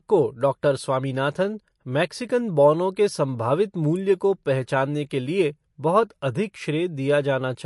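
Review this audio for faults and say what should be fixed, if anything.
The whole recording has a hard ceiling at about 11.3 kHz and a watery, swirly texture on the speech, with s sounds going metallic and consonant onsets smeared. That's likely MP3 compression at a low rate, something around 48 kbps. The encoder ran short of bits, chopped the treble at a fixed frequency and dropped weak spectral lines that flicker from frame to frame. To avoid it, keep a lossless original or encode at a much higher bitrate.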